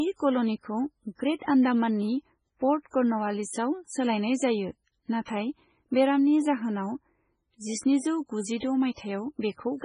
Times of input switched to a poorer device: none

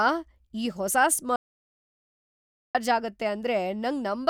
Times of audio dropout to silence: 1.36-2.75

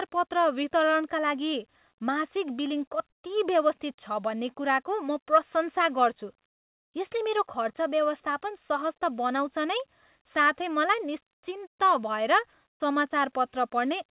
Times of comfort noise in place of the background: 6.46-6.94, 12.68-12.80

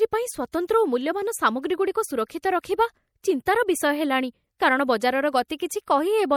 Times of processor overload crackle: none

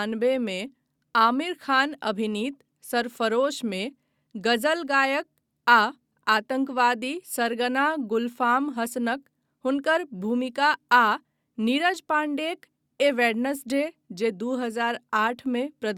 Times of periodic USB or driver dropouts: none

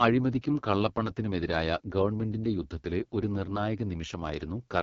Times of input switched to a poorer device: none

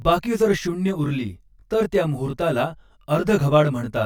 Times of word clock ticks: none

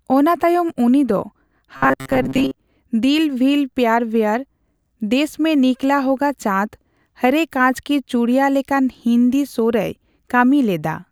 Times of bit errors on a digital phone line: none

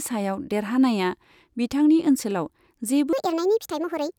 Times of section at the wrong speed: 3.13-4.18

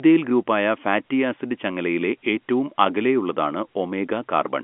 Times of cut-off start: none

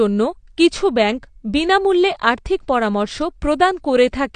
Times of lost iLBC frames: none

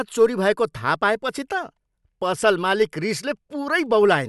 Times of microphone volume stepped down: none

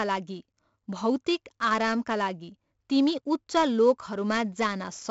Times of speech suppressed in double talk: none

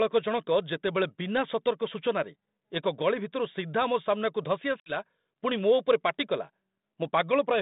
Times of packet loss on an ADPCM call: 4.80-4.96

